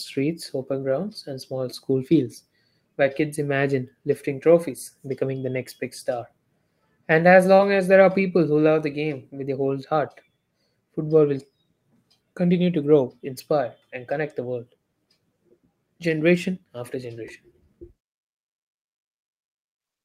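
At 7.55 to 7.61 s, just before "as there are people", a short concealed packet loss leaves about 40 ms missing; the decoder extends the preceding sound for roughly 31 ms, heard as a brief smear. From 7.59 to 7.61 s, a lost packet rebuilt from error correction fills 20 ms from a low-bitrate redundant copy, which points to a single lost packet and sounds rougher and noisier.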